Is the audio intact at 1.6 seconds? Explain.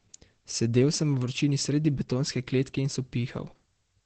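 No. At 1.6 s, as across the whole clip, the speech is muffled and hoarse with nothing above 8.7 kHz, likely from heavy Opus compression at a rate near 12 kbps in its SILK speech mode. A spectrogram shows a hard, flat ceiling at 8.7 kHz.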